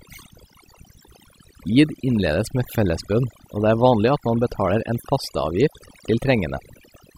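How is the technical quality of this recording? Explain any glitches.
The speech in this recording suffers from overdone noise removal that runs from start to finish. A noise reduction process was pushed too hard: each frequency band that sits close to its noise estimate is pulled down sharply or shut off, and the softer parts of the voice fall into that range and get cut along with the noise. The pauses drop to near silence dotted with small twinkling specks.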